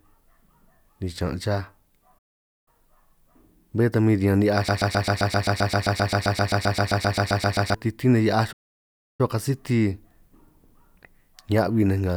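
At 2.18 s, right after "ni chaan' chaj", the speech cuts to silence until 2.68 s, a playback stall of about 0.48 s. The output goes dead mid-flow, which likely means the player ran dry of buffered data or its audio thread was blocked. Speech resumes once the supply is restored.

From 4.69 s to 7.74 s, following "ta min riñan ni'hiaj", a broken-record loop sets in. A 131 ms fragment repeats back to back about two dozen times, giving a rapid mechanical stutter in place of speech. The likely cause is a stalled player or stream that kept resending the last fragment it held. The speech that belonged in those three seconds is lost, and normal playback returns at "titín nej".

A second playback stall runs from 8.52 s to 9.21 s, a silent gap of about 0.67 s. It is again likely due to buffer underrun or a blocked thread.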